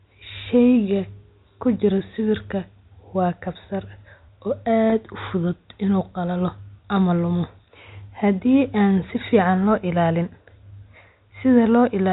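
Packet loss with pitch repetition occurs from 4.90 to 4.92 s. A 20 ms stretch, consistent with a single lost packet on the G.711 telephone-coded line, never arrived. The receiver filled the gap by repeating the last pitch period, giving a brief, slightly held buzz.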